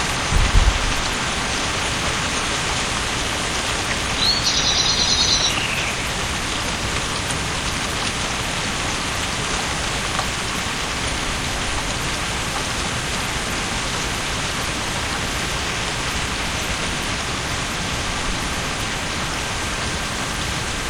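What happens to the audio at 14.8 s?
At 14.8 s, mains buzz runs under the sound, as it does throughout. Switching spikes twice in every 60 Hz cycle add a raspy harmonic buzz, about 15 dB below the sound.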